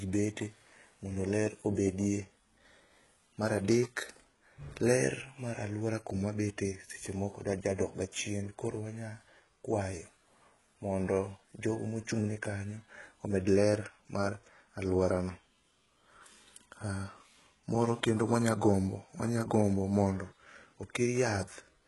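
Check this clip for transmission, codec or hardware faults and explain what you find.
One codec fault runs through the whole clip. The speech carries heavy HE-AAC compression damage, likely from a very low bitrate. Treble is rebuilt from copied lower bands, so s sounds turn gritty and lispy, with nothing above 11.5 kHz.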